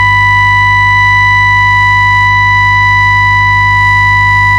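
From the first moment to the end, a steady mains hum sits under the music at 50 Hz, fairly prominent at roughly 10 dB below the programme level. Power-line current is leaking into the signal path, most often through a ground loop or a nearby transformer. Unlike rumble or a low instrument note, the tone holds exactly the same pitch and level throughout, and it does not follow the music's dynamics or change with playing.

Throughout the clip there is also hard clipping. The signal was driven about 3 dB past what a stage in the chain could pass, so its peaks are sliced flat, affecting only a small share of the waveform. Those flat tops create high harmonics that are heard as a brittle crackle riding the loudest moments. Soft saturation would round the peaks into a warmer thickening. Here the edge appears abruptly on peaks and vanishes between them.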